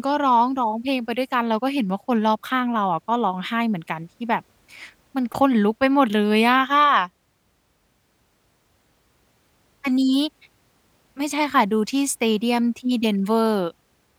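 No technical faults are audible anywhere in the speech recording.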